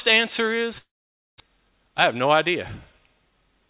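From 0.78 s to 1.42 s the sound breaks off and the last fragment is stretched into a buzzy continuation that fades, leaving silence for about half a second. This is most likely a long network dropout: roughly 0.4 s of audio never arrived and is simply absent when sound resumes. Unlike a brief packet loss, the concealment here gives up and goes quiet rather than smoothing over a short gap.

From 1.50 s to 3.68 s the audio plays about 5 percent fast at unchanged pitch, which is a jitter buffer speed-up. After the dropout the buffer held around a fifth of a second more than it aims for, and the receiver trimmed it by cutting short pitch-period pieces, about a tenth of a second in all. The steady pitch separates this from a clock or resampling error, which would raise pitch along with speed. Throughout, nothing is heard above 4 kHz, which fits a G.711 A-law call path.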